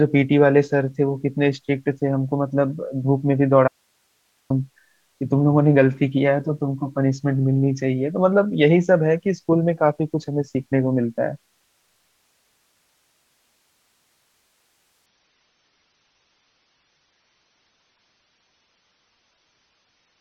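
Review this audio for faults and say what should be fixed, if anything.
At 3.68 s the speech cuts out for 0.82 s, leaving only faint hiss until 4.5 s. That's an audio dropout, likely a brief loss of the signal while the path stayed live.

From 15.06 s to the end, the adaptive stream shifts to a lower bitrate. Treble vanishes above 6.3 kHz and codec artefacts rise, which fits a drop from about 96 to 24 kbit/s AAC.

To prevent both, strengthen the connection and buffering so the stream holds its higher rate and the signal doesn't drop out.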